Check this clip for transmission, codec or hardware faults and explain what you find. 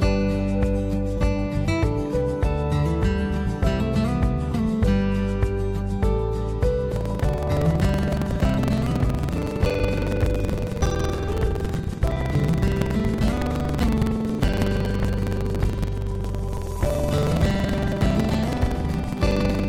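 One hardware fault is present: buffer tearing, from 6.87 s to 19.69 s. The writing program and the playback hardware have slipped out of step. They now cross inside each buffer. A small slice of every buffer replays audio about a fifth of a second old, with hard joins on both sides. This gives a steady robotic rattle at 21.5 Hz, which fits a 2048-sample buffer.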